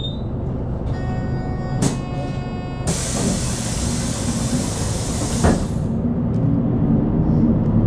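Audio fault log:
Nothing to log here; the sound comes through without a single fault worth noting.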